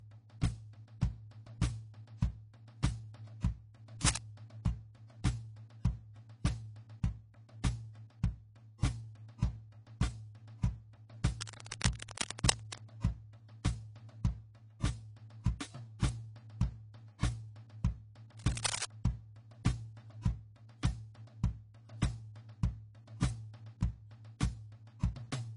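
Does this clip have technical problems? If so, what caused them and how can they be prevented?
Yes. Throughout the music, nothing is heard above 10.5 kHz, and two sets of coding artefacts sit together. This is likely transcoding between lossy codecs. The sound fits an MP3 re-encoded to low-rate AAC. Encode once, from the original source, at an adequate bitrate.

Cable scratch noise appears at 4.01–4.18 s, 11.4–12.8 s and 18.38–18.85 s. These are dense rustling bursts about as loud as the music. A worn cable or connector was likely moving, so its contact resistance kept changing. Clean or replace worn leads, and secure cables during recording.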